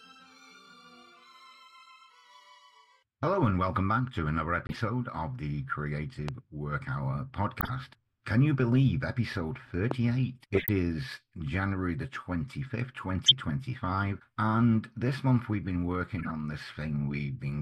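A short dropout and several bursts of corruption run through the audio. At 4.67 to 4.75 s the sound cuts abruptly to silence for about 78 ms. This is a corrupt frame muted. The decoder rejected damaged compressed data, and the player filled the gap with silence. The length fits three frames of about 26 ms. Two sharp single loud pops land at 6.29 to 6.31 s and 9.91 to 9.93 s. Each peaks well above the surrounding audio, about 15 dB louder. The sound continues underneath. An electrical spike from a switch, plug or driver glitch is the likely cause. Four corrupt frame decoded events follow, at 7.61 to 7.70 s, 10.54 to 10.69 s, 13.26 to 13.32 s and 16.18 to 16.31 s. Here damaged frames were played anyway, so energy landed at wrong frequencies. The one at 13.26 s is the loudest, and the one at 16.18 s the faintest. The first two each also add 18.7 ms to the timeline.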